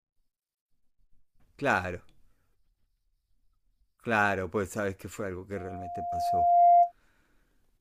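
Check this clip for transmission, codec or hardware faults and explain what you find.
There is one fault: a loudspeaker feedback squeal. From 5.55 to 6.92 s, the microphone re-amplifies its own loudspeaker at 698 Hz. The tone swells over about a second to roughly 15 dB above the speech.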